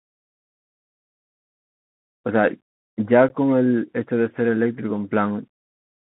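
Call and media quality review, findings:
Bluetooth CVSD headset codec, whole clip: narrowband speech, band roughly 150 Hz to 3.4 kHz, which fits a 64 kbps CVSD headset link. The one-bit delta coder's adaptive step lags loud high-frequency energy, so sibilants sound scratchy over granular hiss. Spectrogram: hard ceiling near 3.4 kHz, speckled noise floor.

Unconcealed Bluetooth headset packet loss, 3.29 s: a 15 ms dropout with abrupt edges, with level briefly reduced on recovery. This points to a few lost headset voice packets replaced by silence, with no concealment. Waveform: flat gap with square edges. Spectrogram: thin vertical blank band.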